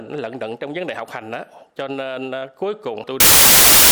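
From 3.20 s to the end at 3.91 s, samples built from the wrong bytes turn the audio into loud, harsh broadband noise. The reader misassembles each sample, so jittery low bits become dominant.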